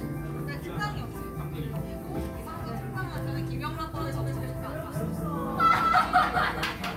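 From 3.96 s to the end, every sound repeats about a fifth of a second later, somewhat quieter, starting abruptly: a doubled audio track, likely from an edit holding two copies.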